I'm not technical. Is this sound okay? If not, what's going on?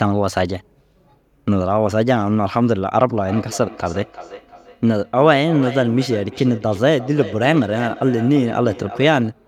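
No. From about 3.3 to 9.4 seconds, each bit of speech comes back about a third of a second later, quieter and thinner. This is feedback echo between two devices: two devices in one room share the call, and one device's microphone picks up the other's speaker.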